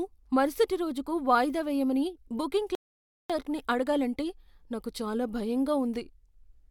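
At 2.75 s, just after "రోజుకు వాయిదా వేయమని బుకింగ్", there is a rebuffering stall. The player ran out of downloaded audio and stopped. Silence lasts until 3.30 s. The speech then resumes at "అడగాలంటే నాకు చాలా" with nothing lost, adding 0.55 s.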